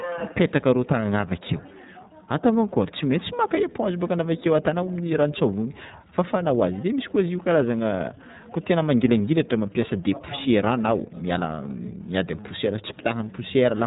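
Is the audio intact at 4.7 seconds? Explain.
No. Throughout the clip, including 4.7 s, an iLBC codec codes each 30 ms frame independently and strips everything above 4 kHz, leaving speech muffled, a little rough and synthetic.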